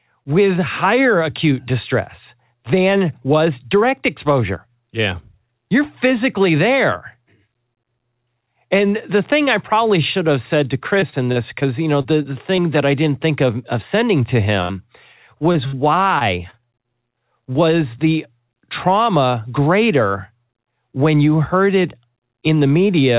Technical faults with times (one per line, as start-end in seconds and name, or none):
11.00-11.63 repeated packet loss (robotic sound)
12.01-12.26 short concealed packet loss
12.56-12.61 short concealed packet loss
14.62-14.73 burst of packet loss
15.52-15.56 short concealed packet loss
15.66-15.75 burst of packet loss
16.19-16.87 repeated packet loss (robotic sound)